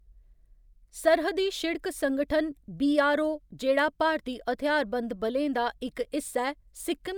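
The speech recording carries no audible technical faults anywhere in its duration.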